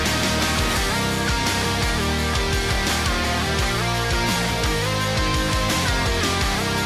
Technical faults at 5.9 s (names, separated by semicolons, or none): none